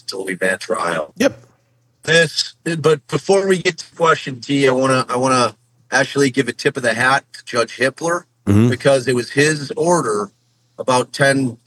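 No technical faults can be heard anywhere in this audio.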